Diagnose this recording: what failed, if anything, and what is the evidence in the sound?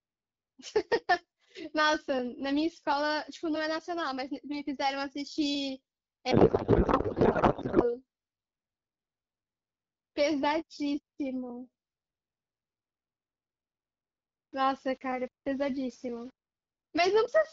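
Codec payload misread, 6.31 to 7.93 s: the speech gives way to garbled noise and warble that barely follows it. This is the codec stage: the AMR frames were octet-aligned but decoded as bandwidth-efficient, so every field landed in the wrong bit position.

Low bit depth without dither, 12.77 to 16.53 s: the speech turns grainy, with distortion around 30 dB below the signal that rises and falls with it. The likely cause is a sample-format conversion that rounded to about 7 bits without dither.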